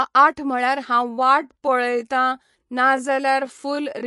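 From the start the speech sounds watery and swirly, with nothing above 11.3 kHz and plainly audible codec damage. That fits MP3 compression at a low bitrate, likely near 48 kbps: the encoder cuts the treble and drops weak frequency lines that flicker between frames.

At 1.07 s the pace suddenly slows to about 0.7 times normal speed, while the pitch stays the same, and the speech drags until the end. This is likely a time-stretched section, where short pieces were repeated to lengthen the audio without shifting pitch.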